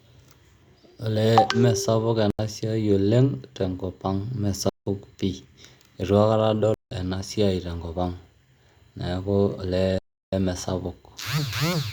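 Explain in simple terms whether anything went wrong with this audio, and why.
The speech cuts out four times into a block of digital silence: at 2.30 s for 85 ms, at 4.69 s and 6.74 s (just before "ena siai tenkop ang'") for 171 ms each, and at 9.98 s for 341 ms. Each gap is likely there because the program didn't fill its audio buffer in time.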